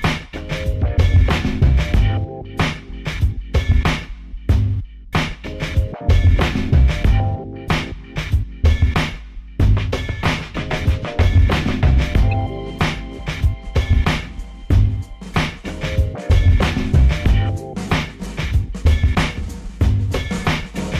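At 12.31 s there's a corrupt frame decoded: one damaged compressed frame got played anyway, throwing energy to wrong frequencies, a short glitch peaking around -25 dBFS.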